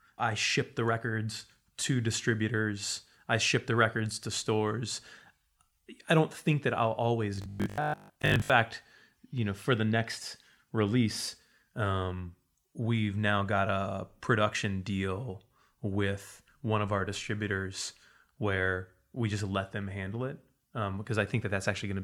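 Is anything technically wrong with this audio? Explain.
Yes. From 7.36 to 8.52 s, just after "don't think that I'll", the speech turns into robotic sound from repeated short buffers: a rigid 50 Hz metallic buzz that only loosely follows the words. The likely cause is data arriving too seldom, so a roughly 20 ms slice is replayed in place of most of the real audio. The fixed buzz pitch, not separate clicks or gaps, sets it apart from dropouts.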